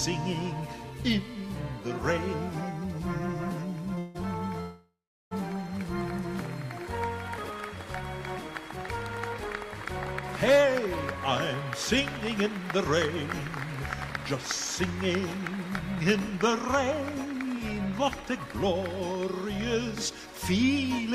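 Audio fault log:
3.99–4.17 s and 4.61–5.33 s, call audio freeze: the sound stalls twice, and each time the last moment is stretched into a decaying buzz. The first stall lasts 0.16 s. The second lasts about 0.7 s and fades into roughly 0.38 s of silence before the audio resumes exactly where it stopped, with nothing skipped. This is likely packets held up in transit draining the jitter buffer, so the delay grows by the length of each pause.
7.38–7.50 s and 14.10–14.22 s, chunks out of order: each time a 60 ms piece of audio plays one slot late, after the piece that should follow it. Nothing is lost, but the sequence is swapped and three abrupt joins result. The moment sounds briefly jumbled.
12.17–21.11 s, jitter buffer speed-up: from 12.17 s to the end, the audio runs about 5% fast with its pitch unchanged. The buffer was holding more than its target, so the receiver repeatedly cut out tiny pitch-period-length slivers to bring the delay back down, roughly half a second in total. 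The result sounds slightly rushed, and any steady pacing pulls forward.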